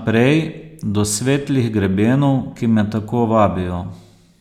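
At 2.13 s a single sharp click cuts through the speech, a thin vertical line across the spectrum. The likely cause is dropped samples: a couple of samples, a tiny fraction of a millisecond, went missing, so the waveform jumps abruptly to a later value.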